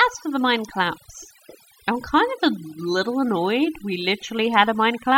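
Overdone noise removal runs through the whole speech clip. The noise reduction was set too aggressively for a noisy source, so any frequency band sitting close to the estimated noise floor is pulled far down or gated off entirely. Low-level parts of the voice fall below that threshold and are removed along with the noise. Between phrases the background drops to near silence dotted with twinkling, chirpy specks.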